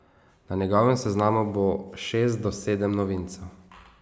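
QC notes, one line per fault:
Nothing stood out on listening to this speech clip.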